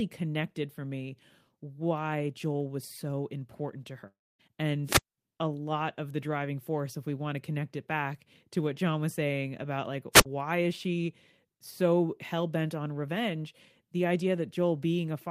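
At 4.07 s, right after "was so important to", the speech gives way to a fading buzzy continuation of the last sound and then about 250 ms of silence, with roughly a third of a second lost before it resumes at 4.41 s. This is likely a long network dropout: the receiver stretched the final audio while packets stopped arriving. Unlike a squelch mute, no hiss builds up beforehand.

Two wireless microphone squelch dropouts follow. From 4.85 to 5.18 s, just before "a lot of the", static swells and the output is muted for about 210 ms. From 10.12 to 10.26 s, between "was saying about like" and "is she so hell", a shorter 59 ms hole appears. Each one starts with a rise of hiss as the FM signal weakens, and that rising hiss is what sets it apart from the smooth fade of the network gap.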